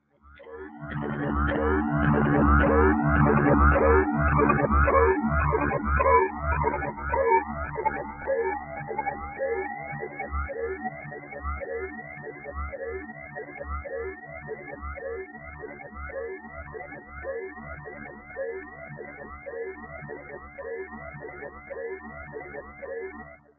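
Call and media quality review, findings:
Noise suppressor applied to music or sounds: level pumps and flutters across the whole clip, gain swinging by about 15 dB. Speech-tuned suppressor left on in the call path, treating steady tones, ambience and tails as noise and ducking them while attacks pass. The band tops out near 8 kHz, as expected from the call mic chain.

Sound cut by the noise suppressor: dips at 0.01–0.24 s (about 11 dB), 6.93–10.26 s (about 7 dB), 10.84–12.5 s (about 8 dB), 13.05–13.62 s (about 7 dB), 14.15–14.65 s (about 7 dB), and 15.26 s to the end (about 11 dB, roughly four seconds squashed). Sustained and decaying parts sink or get their tails chopped; transients survive.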